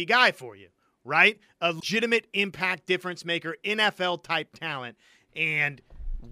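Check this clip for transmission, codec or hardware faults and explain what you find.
One fault is present: damaged data in a compressed stream, from 1.77 to 1.83 s. Corrupted bytes there make the decoder misread the frames, lose sync and hunt for the next valid header, so the speech is briefly disrupted.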